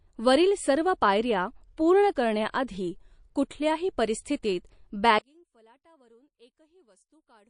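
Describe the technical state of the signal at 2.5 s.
A burst of hiss arrives just ahead of an attack, between 2.51 and 2.54 s, after "सर्व पायऱ्या पूर्ण करण्या" and before "आधी कुठल्याही परिस्थितीत". The noise rises about 19 dB above the quiet that should precede the onset, and the onset itself sounds softened. This is pre-echo. The codec spread its quantisation noise across a whole transform block, and the noise sized for the loud attack spilled about 27 ms backward into the silence. The smearing fits a block of roughly 52 ms, which suggests the encoder never switched to short blocks for the transient.

Around that moment the sound also has a watery, swirling texture, which is plainly audible MP3 compression. The likely cause is a low bitrate, consistent with about 40 kbps. With bits that scarce, the encoder drops weak frequency lines that flicker in and out between frames.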